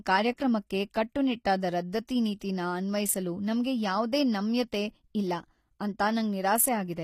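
Throughout the speech, the treble has a gritty, metallic edge and sibilants sound lispy, likely from HE-AAC compression at a rate that fits about 24 kbps. The upper band is rebuilt from copied lower bands, so on a spectrogram harmonics break off at the crossover and nothing appears above 15.5 kHz.

At 3.63 s, between "ನೀತಿನ ಅನ್ವಯಿಸಲು" and "ಯಾವ್ದೇ ನಮ್ಯತೆ ಇಲ್ಲ ಅಂತ", pre-echo puts a brief hiss about 15 ms ahead of an attack, blurring its onset. Block-wide quantisation noise spills into the quiet gap, showing as a noise smear before the transient on the waveform and spectrogram.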